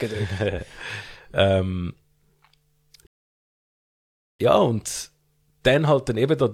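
At 3.07 s the speech cuts off into silence and stays silent until 4.39 s, then picks up again with "ja und". This is a rebuffering stall: the player used up the audio it had downloaded and paused until more data came in. It then carried on from exactly the same point, so no speech is missing, but about 1.3 s of dead time is added. On the waveform this looks like a flat gap between two intact sections, and on the spectrogram it is an empty vertical band.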